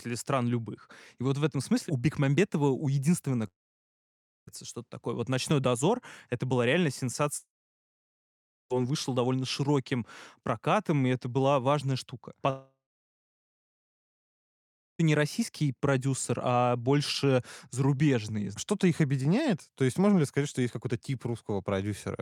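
Speech clip with three gaps, likely long network dropouts. After "у единственного" the sound stops from 3.47 to 4.49 s. From 7.37 to 8.72 s it stops between "это была реально" and "вышел довольно широким прокатом". From 12.50 to 15.01 s it stops between "это была важная штука" and "не российский продюсер а". Each gap starts with a short fading buzz. Silence follows for about 0.95, 1.24 and 2.23 s. The speech then resumes, with that stretch lost.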